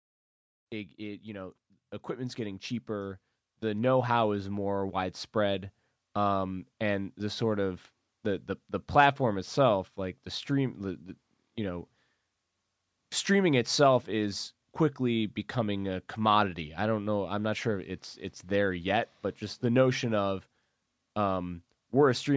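Speech clip in which the automatic gain control, finding the input too quiet, raised its gain steadily from 0.97 s to 11.08 s, by about 11 dB in total; automatic gain rising makes the voice and the background noise swell together across those ten seconds rather than staying at one level. The opening fade-in, running from about half a second to 0.68 s, is smooth, and the call microphone processing leaves nothing above 8 kHz.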